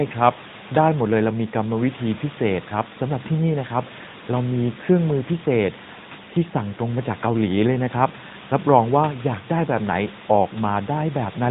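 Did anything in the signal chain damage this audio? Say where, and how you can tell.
Yes. The damage sits at the codec stage: the speech has passed through the AMR narrowband mobile codec for its whole length. Nothing above 3.8 kHz survives, so sibilants lose their edge and the sound is boxed in. The codec damage is plainly audible. Vowels turn buzzy and synthetic, as the vocal-tract model rebuilds each 5 ms from a few pulses. The room noise, about 19 dB below the speech, is smeared by the same process.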